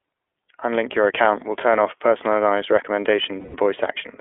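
Throughout, the speech carries the iLBC codec's narrowband sound: nothing below about 300 Hz or above 3.4 kHz, so a spectrogram shows a hard ceiling. Each 20 ms frame is coded independently, which fits the 15.2 kbps mode, and leaves the voice plainly rough and synthetic.

From 3.40 to 3.56 s, lost iLBC frames cause a dropout of about 140 ms, which points to seven missing 20 ms frames. The decoder repeats the last pitch cycle mixed with noise, so a held, buzzy vowel replaces the gap. The waveform shows a repeating, fading periodic pattern, and on a spectrogram the harmonics run flat across the gap. The voice is right again almost at once.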